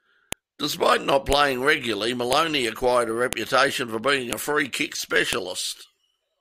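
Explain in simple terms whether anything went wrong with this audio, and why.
A file header played as audio: sharp clicks at 0.33, 1.33, 2.33, 3.33 (after "acquired a"), 4.33 and 5.33 s, one per second-long joined piece.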